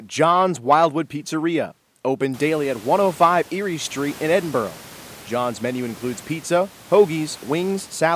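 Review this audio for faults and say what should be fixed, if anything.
Nothing in this speech recording needs to be fixed, as the review turns up no faults.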